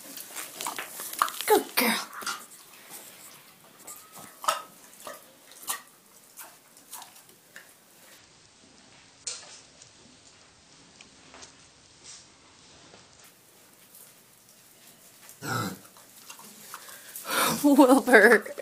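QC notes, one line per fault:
8.18–13.24 s, section at the wrong speed: the audio runs at 0.565 times its proper rate, so it slows and sinks about ten semitones together. Unlike a pure pitch shift, timing stretches too, which suggests the section was likely played against the wrong clock.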